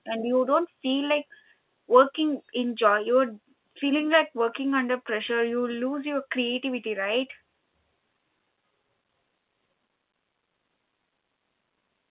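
Speech carried over a telephone-band channel, with nothing audible above 4 kHz as fits mu-law telephone coding, and no technical faults found.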